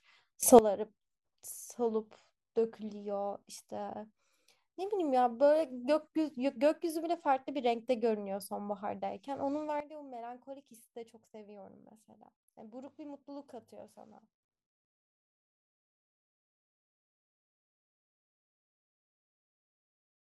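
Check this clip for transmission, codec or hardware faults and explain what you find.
Two sudden gain jumps. From 0.43 to 0.59 s the speech and background noise leap up together by about 16 dB, then drop back. At 9.80 s both fall by about 13 dB and stay down to the end. Each change is instantaneous, likely a gain setting applied without a ramp. Automatic gain control would instead glide in over tens of milliseconds and pump with the speech.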